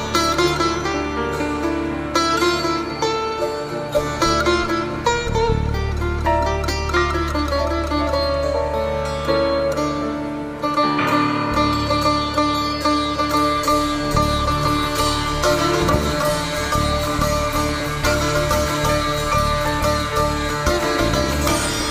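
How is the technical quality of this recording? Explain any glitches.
The recording has one clear problem: periodic USB or driver dropouts near the end. From 15.81 s to 21.83 s, the audio loses a tiny slice every 2.0 s, about four times in all. Each loss is around a millisecond. Something appears to stall the USB bus or the audio driver on a fixed schedule. The missing samples are skipped, not filled with silence. Each join leaves a regular tick, heard only while sound is present.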